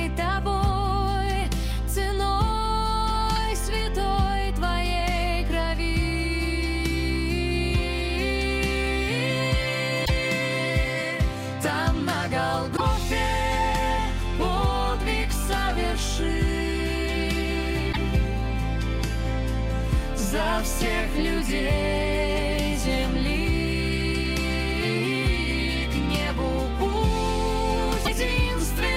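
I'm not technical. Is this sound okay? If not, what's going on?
No. The clip has damaged data in a compressed stream. Short bursts of garbled noise, like chirps or blips, occur at 3.36 s, 10.02 to 10.10 s, 12.73 to 12.81 s, 17.89 to 17.97 s, and 28.02 to 28.09 s. Each lasts well under a tenth of a second. At those points some of the stored file is corrupted, so the player can't decode that bit correctly and outputs junk until it finds clean data again.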